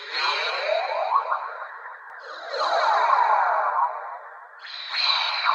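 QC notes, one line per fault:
2.1–3.7 s, doubled audio track: a second full-band copy of the sound trails the original by roughly a fifth of a second, about 5 dB quieter, with no decay or room colour. It starts and stops abruptly, likely from a slower second capture path. On a spectrogram every event appears twice at a fixed offset, and the waveform shows a dry, scaled repeat.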